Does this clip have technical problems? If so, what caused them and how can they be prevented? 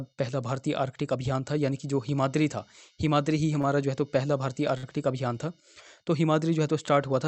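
Yes. A short stall from a late packet occurs twice, at 3.61 to 3.67 s and at 4.78 to 4.86 s. Each time, a packet arrived late, the jitter buffer ran dry, and the receiver stretched the last sound for 21 ms, then 55 ms, before resuming from the same point. Nothing is lost, but the sound hangs with a faint buzz or dip. A larger or adaptive jitter buffer on a steadier network prevents this.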